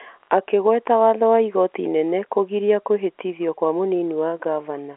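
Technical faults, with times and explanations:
Nothing stood out as a fault on listening to this speech recording, which comes across as ordinary telephone-line audio with nothing audible above about 3.8 kHz.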